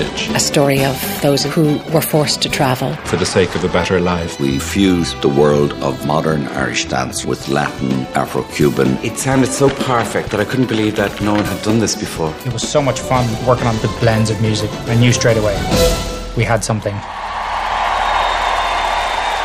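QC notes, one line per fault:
No faults found.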